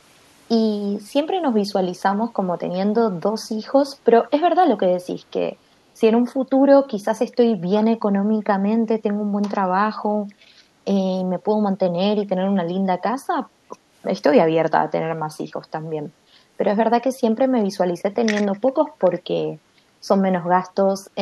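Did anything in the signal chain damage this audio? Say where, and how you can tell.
Yes, there's an echo leak in the call processing, from 19.17 to 19.21 s. A very faint, delayed copy of the speech shows up about 353 ms behind the original. That's likely the far end's echo canceller letting a bit of its loudspeaker pickup back up the line.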